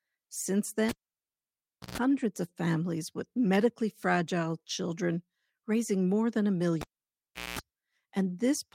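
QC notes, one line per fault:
0.89–1.98 s and 6.81–7.59 s: cable pulled and plugged in. Each event opens with a pop and then falls to near silence while the signal is disconnected, for 1.04 s and then 0.73 s. As the plug goes back in, only the tip touches at first, so the unshielded contact picks up 60 Hz mains buzz for 0.13 s and then 0.21 s. A second pop follows as the connection seats fully and the sound returns.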